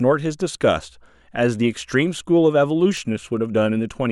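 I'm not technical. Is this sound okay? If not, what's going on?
No. A bit error spike at 2.97 s: one stored digital value had a single bit flipped, so the audio jumps for an instant, causing one sharp tick.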